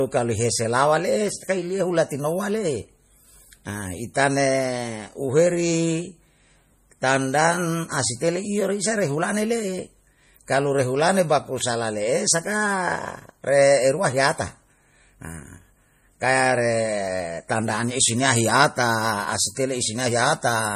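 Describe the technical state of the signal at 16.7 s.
MP3 compression at 16.7 s, as throughout the clip: the speech stops at 15.1 kHz and sounds plainly watery, likely from an encoder starving weak frequency lines at roughly 40 kbps.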